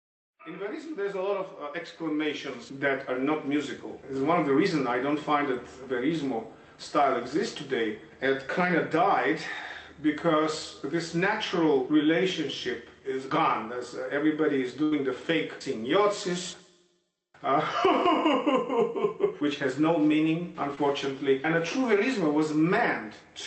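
Audio carried over a WebRTC call path, with Opus coding noise and nothing above 8 kHz. A burst of packet loss at 14.83 to 14.93 s drops about 80 ms; the receiver stretches and fades the last sound across the gap, then resumes further on. At 20.75 s, short concealed packet loss removes 20 ms, heard as a brief smear where synthesized fill blends back into real audio.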